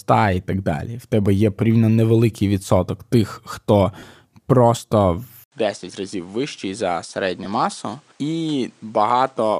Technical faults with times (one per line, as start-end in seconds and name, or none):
1.26 block of digital silence
3.99-4.03 lost LE Audio frames
5.44-9.60 input switched to a poorer device
7.44 lost LE Audio frames